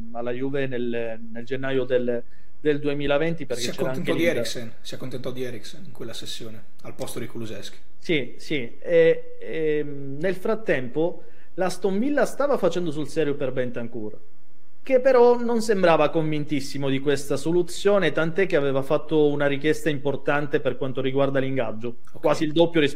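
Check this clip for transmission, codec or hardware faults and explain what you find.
One hardware-type fault runs through the whole clip: a DC offset of about -26 dBFS. A constant voltage, typically from a converter or input stage, shifts the waveform off zero, eating headroom silently. Unlike hum or rumble, it has no pitch or motion, just steady energy at 0 Hz.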